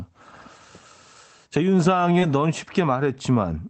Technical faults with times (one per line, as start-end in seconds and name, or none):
2.19-2.23 short concealed packet loss